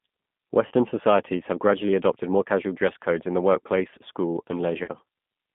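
Throughout, the speech carries G.729 codec damage, plainly audible as a rough, slightly synthetic edge. The sound points to an 8 kbit/s stream rebuilt from a filter, pitch predictor and sparse pulses. A spectrogram shows energy confined to roughly 150 Hz to 3.5 kHz.

VoIP packet loss concealed by the speech codec appears at 0.67 to 0.72 s and again at 4.84 to 4.90 s. Each gap of about 40 ms, which fits two lost packets, is filled with a stretched extrapolation that fades. On a waveform it shows as a shrinking, overly regular stretch.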